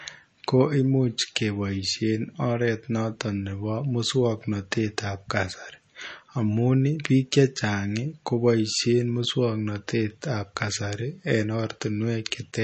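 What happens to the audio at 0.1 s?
At 0.1 s the speech already carries MP3 compression, and the damage persists through the whole clip. There is nothing above about 8.3 kHz, and the bit-starved sound, which fits roughly a 32 kbps encode, is likely from an MP3 encoder cutting the treble and zeroing weak frequency lines that flicker on and off between frames. That is what makes s sounds swirly and metallic and smears attacks. A plain low-pass filter would dull the top end without this watery, shifting texture.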